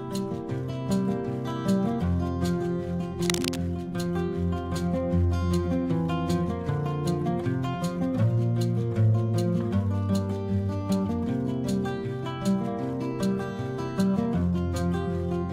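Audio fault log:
3.21–3.56 s, cable scratch noise: a dense, uneven burst of scratching rustle sits over the sound, fairly loud. A moved, worn cable or connector is the likely cause.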